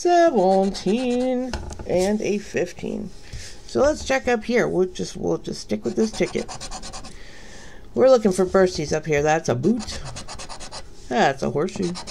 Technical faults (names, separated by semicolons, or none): none